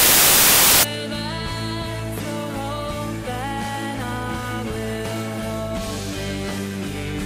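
The reader assembled each sample from the wrong bytes for the first 0.83 seconds, from 0.00 to 0.83 s, either misaligned by a byte or with the byte order swapped. The rapidly fluctuating low-order bits ended up as the most significant part of every value, so the opening is buried under loud, harsh broadband noise.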